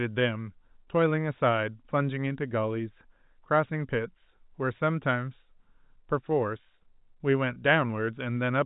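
At 7.54 to 7.56 s, about 20 ms of speech goes missing, which fits a single lost packet, and the gap is bridged by packet loss with pitch repetition: the receiver loops the last pitch period it received. The result is a brief held, slightly buzzy tone. On the waveform, identical cycles repeat. On the spectrogram, the harmonics freeze into flat lines for that instant, all beneath the 4 kHz ceiling of the G.711 telephone band.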